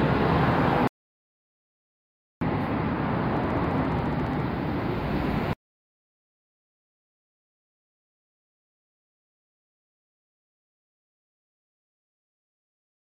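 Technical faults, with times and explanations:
0.88 to 2.41 s, audio dropout to silence: The input signal was most likely lost for about 1.54 s, whether through a disconnected device, a broken link or an unintended mute, while the recording carried on writing silence. The sound stops abruptly and resumes just as abruptly, and the gap between is dead silence with no room tone or background left. Whatever happened during that stretch is missing entirely.
3.37 to 4.41 s, train of clicks: A burst of much-alike pulses, around fifteen in all, arrives at a steady 14.5 per second, probably from electrical interference or a faulty connection or power supply. The clicks peak at roughly the same level as the program material, heard as a fast, even ticking laid over the sound for about a second.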